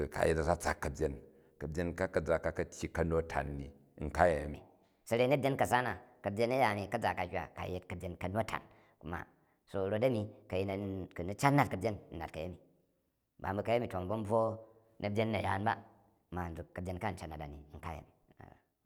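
From 4.54 s to the end, the speech abruptly turns higher and hurried, raised about four semitones and running 1.27 times too fast. This section at the wrong speed was likely played against the wrong clock, shifting pitch and tempo together.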